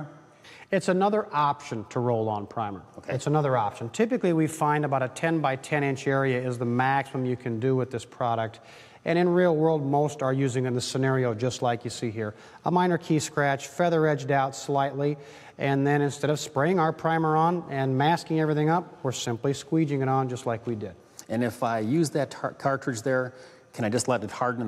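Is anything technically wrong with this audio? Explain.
No, nothing technically wrong is audible anywhere in this audio.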